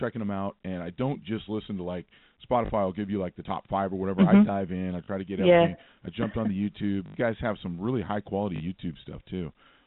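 You'll catch four short robotic stutters in this speech, all packet loss with the last packet repeated: 2.66 to 2.70 s, 5.04 to 5.08 s, 7.06 to 7.14 s, and 8.56 to 8.60 s. The first, second and fourth last 40 ms, which fits two 20 ms packets, while the third runs 80 ms. Each time, audio went missing and the receiver replayed its last chunk to fill the gap. Those replays seldom line up with the pitch, and the longer one buzzes at about 50 Hz. The narrow telephone sound of the G.711 coding sits underneath.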